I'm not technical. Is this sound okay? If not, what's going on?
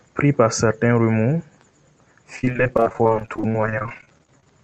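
No. From 2.36 to 4.58 s there is repeated packet loss (robotic sound): dozens of short dropouts, each under 30 ms, are patched over, making the speech choppy and robotic.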